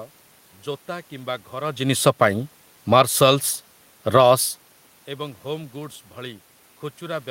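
From 2.78 to 3.23 s the speech and its room background sink together by about 6 dB as the automatic gain falls, the control pulling its gain down after judging the input too loud or its background too strong. From 3.13 to 3.66 s both swell back by about 6 dB, an automatic gain rise restoring the level. The same pattern repeats. Between 4.01 and 4.32 s the level dips by about 5 dB in another automatic gain fall. Then, from 4.23 to 5.35 s, voice and background slowly rise by about 5 dB as automatic gain rising responds to the input dropping by about 22 dB when the talker moves away from the microphone.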